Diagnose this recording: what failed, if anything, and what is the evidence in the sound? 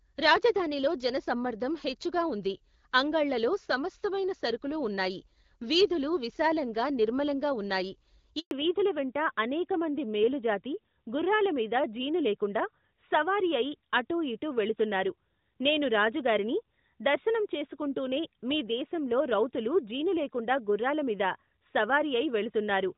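A handover gap in the network path cuts the speech at 8.39 s. The sound dies within a few tens of milliseconds and stays silent until 8.51 s, a hole of 120 ms. On the waveform it shows as a short flat line after a brief taper, and on the spectrogram as a clean vertical blank band across all frequencies. No speech frames reached the decoder while the call was passed between networks, so whatever was said in that instant is gone.

Straight after the gap, at 8.51 s, the call falls back to narrowband for the rest of the clip. Before it, the decoded band reaches up towards 7 kHz with light codec roughness, which fits AMR-WB HD Voice at around 12.65 kbit/s. After it, nothing remains above 4 kHz, and the speech sounds duller and rougher. On the spectrogram the upper energy ends abruptly along a flat horizontal ceiling at 4 kHz. The codec negotiation dropped to an older narrowband coder, most likely AMR-NB at 12.2 kbit/s.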